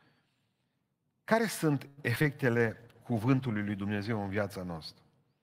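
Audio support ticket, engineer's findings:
Choppy, robotic speech 1.87 to 2.26 s: repeated packet loss, four gaps, longest 100 ms. Jitter buffer concealment stretches the previous audio over about a third of the span (130 ms), and 60 ms is simply missing.

Rough, watery, muffled speech 2.60 to 4.45 s: call bitrate drop. The sound fits the encoder falling from about 48 to 15 kbps for roughly 1.8 s. Coarser Opus coding, with the high frequencies cut, until the bandwidth estimate recovers.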